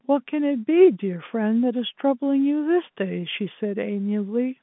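No technical faults are audible: the speech carries the narrow telephone band of G.711 coding, roughly 150 Hz to 3.5 kHz with nothing above about 3.8 kHz, after the call microphone processing, and any quantisation noise stays faint beneath the signal.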